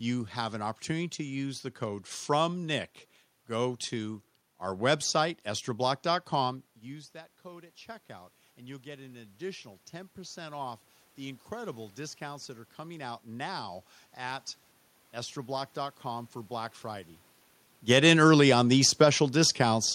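From 6.84 s to 18.78 s the automatic gain rising fault sets in. Shortly after the talker moves away from the microphone at roughly six and a half seconds, the voice arrives about 17 dB quieter, and the gain control slowly climbs by about 9 dB over nearly twelve seconds to make up for it. The voice creeps back up in level, and the room noise swells with it, so the background grows louder along with the voice.

At 17.75 s, shortly after the talker comes back toward the microphone at roughly seventeen seconds, the automatic gain falling fault begins. The gain still holds much of its earlier boost, so the now-closer voice comes in too loud, and the control pulls back by about 4 dB through to 19.89 s. The voice starts hot and then sinks, and the room noise sinks with it.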